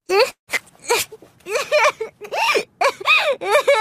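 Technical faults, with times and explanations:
0.31–0.49 s, call audio freeze: the last sound stretches into a fading buzz that sinks to silence for about 110 ms, likely from delayed packets emptying the jitter buffer. Unlike a dropout, nothing is lost; the audio resumes where it stopped, about 160 ms late.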